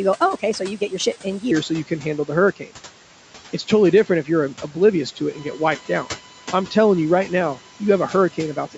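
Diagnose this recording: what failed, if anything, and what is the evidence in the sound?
The opening 1.51 seconds, up to "so you", run at 1.2 times normal speed, so pitch rises by about three semitones and tempo rises with it. That's likely a playback or editing stage clocking the section at the wrong rate, making a section at the wrong speed.

From 5.32 s, right after "um oblivious to it", a steady 1 kHz USB whine sits about 25 dB under the speech and runs to the end. That pitch matches the bus's 1 ms frame rate, leaking into the analogue side through power or ground.

Noise suppressor artifacts run throughout. The call processing pulls the background down by about 12 dB between phrases, and the noise comes back up underneath whenever speech is present, because the suppressor decides frame by frame which bands to cut.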